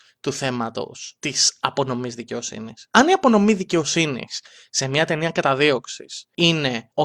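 A recording of speech, with nothing technically wrong with it.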